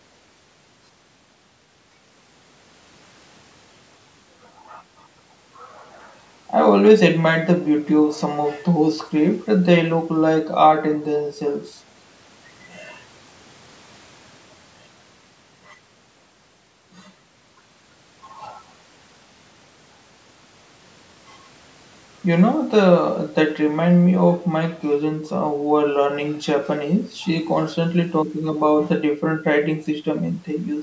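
No technical faults can be heard in the speech; it carries the ordinary marks of a call's microphone processing, with the lowest bass trimmed by its high-pass filter and nothing above 8 kHz.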